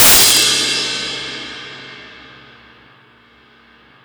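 From the very start until about 0.42 s, the sound suffers integer overflow. Loud peaks are driven roughly 10 dB past full scale, and instead of being held at the limit, the sample values wrap around to the opposite extreme. Each overshooting peak therefore jumps across the entire range, producing violent, sharp cracks. Ordinary clipping flattens peaks into a buzzy, compressed distortion, but here the wraparound creates far harsher snapping bursts on the peaks.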